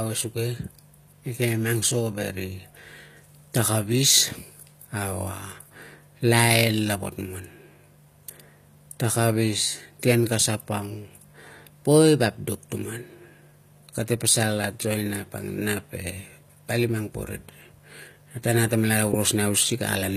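Throughout the speech, s sounds come out gritty and metallic, with a bright but synthetic treble that doesn't sit with the lower voice. That points to HE-AAC compression, likely at a low bitrate around 24 kbps, rebuilding upper bands by copying lower ones.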